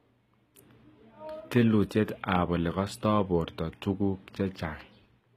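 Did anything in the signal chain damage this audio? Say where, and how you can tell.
Yes. HE-AAC compression runs throughout this speech, plainly audible, and the codec stage is the likely culprit. The treble is rebuilt by copying lower bands upward, so s sounds come out gritty and lispy, with harmonics misaligned above the crossover, which fits a low bitrate around 20 kbps.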